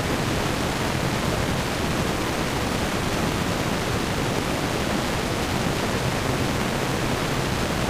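At 3.24 to 3.36 s and again at 4.40 to 4.48 s, chunks out of order: a 40 ms block plays two chunks late, then one chunk late, so the sound jumps back and forth. The waveform shows hard discontinuities at each join, and the spectrogram shows vertical lines there.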